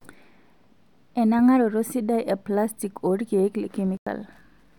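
At 1.39 s there is a corrupt FLAC frame. Flipped bits reached the decoder, which did not verify the frame's checksum, so from the damaged point onward the linear prediction worked from wrong values and rebuilt garbage samples. What you hear is a brief error peaking at about -22 dBFS, directly before "sidai eplastik oorkiek". The error stops where the next intact frame begins, and that frame decodes cleanly.

From 3.87 to 4.07 s there is a corrupt frame muted. Here the decoder detected damaged compressed frames and rejected them, and the player filled the gap with silence instead of passing on bad data. The result is a hole of about 0.2 s that opens abruptly and closes just as suddenly. Its length fits roughly three consecutive frames being dropped. The timing around the gap is preserved, so the speech picks up exactly where it should, with nothing shifted.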